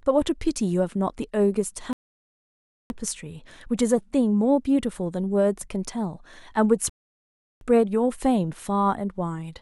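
Rebuffering stalls at 1.93 to 2.90 s and 6.89 to 7.61 s: the player exhausted its downloaded audio and halted until more data arrived. The speech drops to silence, then picks up exactly where it stopped, with nothing missing but about 0.97 s and 0.72 s of delay added.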